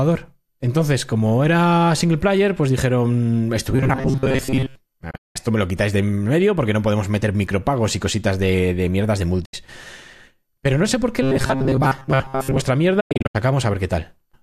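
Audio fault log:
3.71 to 4.76 s, robotic sound from repeated short buffers: right after "single player pues dijeron" the speech goes rigid and metallic, buzzing at a fixed 133 Hz while still loosely tracking the words. Roughly 70% of the audio there is being replayed, which fits the likely cause of audio arriving too seldom and the player looping a buffer of about 7.5 ms, whose repeat rate sets that pitch.
5.11 to 5.36 s, digital broadcast dropout: just before "me lo quitáis de" the sound fades out over about 8 ms and goes silent in short holes spread across 240 ms, 216 ms lost in all, the longest gap 192 ms. That points to the receiver muting on about nine bad frames until clean ones returned, so whatever was sent there is gone.
9.45 to 9.54 s, digital broadcast dropout: a brief 72 ms mute with the same quick 8 ms fade, consistent with about three failed frames.
11.22 to 12.66 s, robotic sound from repeated short buffers: after "no sé por qué" the same 133 Hz metallic buzz returns for about 1.4 s, with roughly 70% of the sound repeated, so the starved buffer is likely being looped again.
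13.00 to 13.35 s, digital broadcast dropout: a scattered run of holes over 336 ms, 240 ms lost in total, none longer than 96 ms, each with the 8 ms fade, suggesting about ten bad frames.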